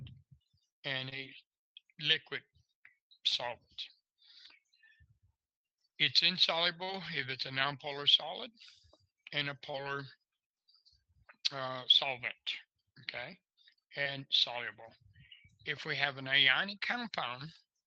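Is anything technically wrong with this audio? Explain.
Yes: short concealed packet loss occurs four times, at 1.09, 6.84, 9.71 and 14.03 s. Each time, about 20 ms (40 ms at 6.84 s) of audio failed to arrive in time, so the receiver extended the preceding sound and crossfaded back. The result is a brief smear or wobble. The call codec also limits the band to 8 kHz.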